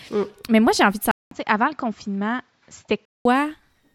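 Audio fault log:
1.11–3.25 s, input switched to a poorer device. After "moi j'ai envie de" the sound drops out for 200 ms. It returns duller, with nothing above 7.6 kHz, roughly 5 dB quieter, over a faint new noise floor. The likely cause is another microphone taking over, then switching back.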